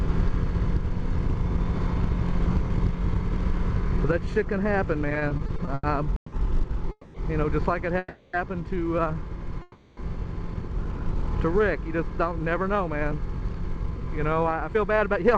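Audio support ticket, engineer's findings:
Repeated stalls (stutter), 5.09–6.33 s: audio catches and drags ten times in quick succession, the last sound held over each gap, longest 160 ms. About 31% of that span is filler, 390 ms total, nothing dropped. Jitter buffer repeatedly running dry as packets arrive late or slower than playout.

Call audio freeze at 6.91–7.15 s (230 ms), 7.98–8.34 s (350 ms) and 9.62–9.98 s (350 ms): sound hangs as a fading buzz or hiss, then resumes where it stopped, nothing lost. Likely packets held up in transit, jitter buffer emptied, each hang adding to the delay.

Jitter buffer speed-up, 11.76–15.28 s: audio runs about 5% fast at unchanged pitch, sounding hurried. Receiver trimming short pitch-period slices in a row, around 0.2 s in all, to work down excess buffered delay.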